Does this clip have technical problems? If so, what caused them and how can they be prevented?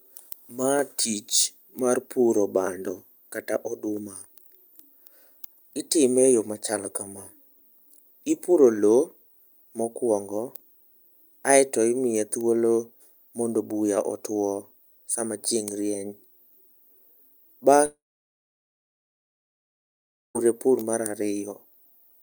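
Yes. From 17.85 to 20.37 s the sound trails off into a short fading buzz, then about 2.4 s of silence, resuming at "pur mar" with 2.5 s lost. This is likely a long network dropout. A more stable connection with forward error correction and a deeper jitter buffer would help prevent it.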